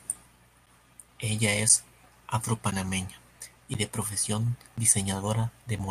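Speech with periodic USB or driver dropouts: roughly every 1.02 s from 0.66 s to about 5.8 s, around 10 ms of audio drops to silence, giving evenly spaced ticks. The waveform shows short flat gaps at that spacing, and the spectrogram shows thin vertical broadband lines at each gap.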